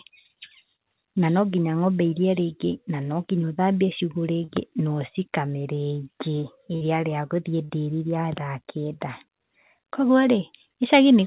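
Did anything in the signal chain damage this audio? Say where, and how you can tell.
Yes. Short concealed packet loss at the network stage gives brief smears or wobbles at 0.76 to 0.80 s, just before "na no nginya", and at 4.44 to 4.50, 7.65 to 7.71 and 9.73 to 9.77 s. Each time, 20 to 40 ms of speech never arrived, and the receiver extended the preceding sound to cover the hole before rejoining the real signal.

A burst of packet loss at 6.76 to 6.83 s sounds like a held buzz or fading hiss, after which the speech picks up further along. About 60 ms went missing in a row, with roughly 50 ms of that filled by continuing the last sound while it decayed, all riding on band-limited audio with nothing above 4 kHz that fits G.711 mu-law at 64 kbps.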